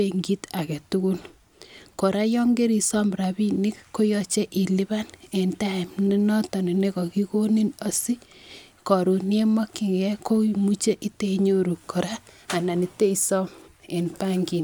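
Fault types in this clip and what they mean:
No technical faults can be heard in this speech recording. There is nothing to list for it.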